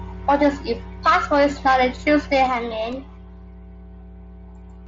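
A mains hum runs through the whole speech clip: a steady 60 Hz tone sitting roughly 15 dB below the speech, leaked in from the power line. On a spectrogram it is a thin, unbroken horizontal line at 60 Hz, with faint lines at its low harmonics, present even in the pauses.

At 2.47 s the level drops abruptly by 6 dB and stays down until the end of the clip. The likely cause is one stereo channel dropping out, so only half of the shared signal survives the mono mix. The waveform envelope visibly steps down at that point.

At 2.92 s there is a single concealed Bluetooth headset packet loss, about 7.5 ms long. The receiver patched the gap by repeating a matching slice of the preceding waveform. It passes almost unnoticed, showing at most as a tiny smeared, repeated patch on the spectrogram. This happens beneath the mSBC headset codec's 8 kHz speech band.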